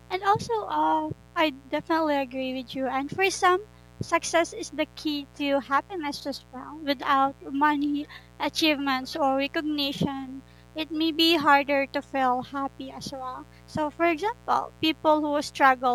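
Speech with a mains buzz running under it from start to finish, sitting roughly 25 dB below the talker. It's the raspy 60 Hz kind, with sharp spikes twice per cycle from a dimmer, rectifier or unshielded cable, so harmonics climb well into the kilohertz range.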